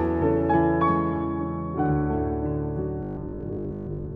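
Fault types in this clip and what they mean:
robotic sound from repeated short buffers: From 3.03 to 4.15 s the sound becomes a rigid metallic buzz at 50 Hz, fitting a 20 ms chunk looped through most of that span, likely from audio arriving too seldom. Unlike steady mains hum, it loosely tracks the sound.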